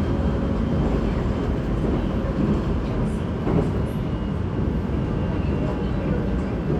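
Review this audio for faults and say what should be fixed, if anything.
No faults can be heard in these sounds, so nothing needs fixing. No repair or change to the recording chain is called for.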